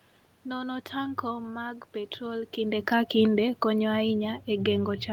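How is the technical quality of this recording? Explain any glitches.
One glitch affects the latter half of the speech. Automatic gain falling, from 2.57 s to the end: the gain control judged the input too loud or its background noise too strong and lowered its gain gradually, so the speech and the room noise sink together. The level change around two and a half seconds, where the talker moves relative to the microphone, is natural rather than a system fault.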